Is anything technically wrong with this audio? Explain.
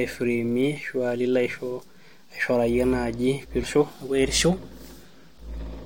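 Yes. At 3.62 to 3.65 s the speech has damaged data in a compressed stream. Part of the encoded data there is corrupt. The decoder misreads those frames, loses sync and hunts for the next valid frame header. The result is a brief glitch, heard as a chirp, squawk, click or short hole, about 22 ms long.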